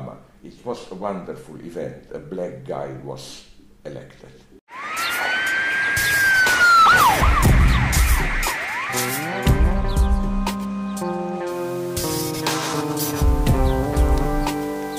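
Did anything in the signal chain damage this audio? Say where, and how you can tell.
Yes. A sample-format conversion most likely requantised the audio to about 6 bits by plain rounding, with no dither. From 11.48 s to the end, a grainy distortion tracks the sound, sitting only about 25 dB below it, and the quietest passages turn gritty or sputter.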